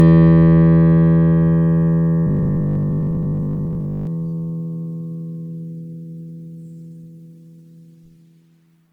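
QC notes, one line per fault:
throughout, generation loss: the music was likely re-encoded to MP3 many times, around 92 kbit/s, so stacked quantisation leaves it swirly, smeared and hollow, with blurred attacks.
2.27–4.07 s, robotic sound from repeated short buffers: audio arrived too seldom and short chunks were looped, with roughly half replaced, likely stalled delivery, forcing a rigid 50 Hz metallic buzz, which fits 20 ms buffers.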